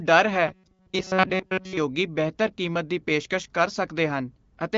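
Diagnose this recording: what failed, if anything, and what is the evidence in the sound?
Driver or buffer stage: from 0.48 to 1.77 s the speech becomes a rigid metallic buzz locked at 188 Hz. This is likely robotic sound from repeated short buffers, with a segment of about 5.3 ms looping through most of that stretch. Unlike codec rasp, its pitch stays fixed.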